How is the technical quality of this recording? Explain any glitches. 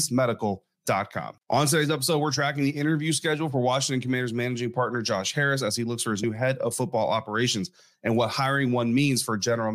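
One glitch stands out, at 6.23 s, between "he looks for his" and "head of football operations". Compressed frames are skipped there. The audio jumps ahead by roughly 50 ms, which fits two missing 23.2 ms frames.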